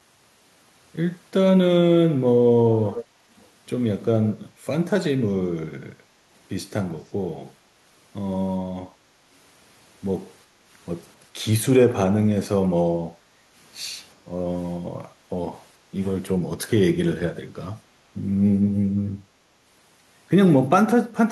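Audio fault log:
2.94–3.05 s and 3.40–3.47 s, echo leak: a delayed copy of the speech comes back 389 ms late, first as a short scrap about 10 dB below the speech, then as a faint trace about 35 dB down. It likely comes from a loudspeaker whose echo canceller let part of the microphone pickup through.
10.48–10.65 s, 13.13–13.53 s and 15.13–15.25 s, background gated by the echo canceller: the room sound briefly sinks by about 6 to 7 dB, for roughly a tenth to four tenths of a second, then comes back. The canceller turned the microphone down hard while the loudspeaker was playing.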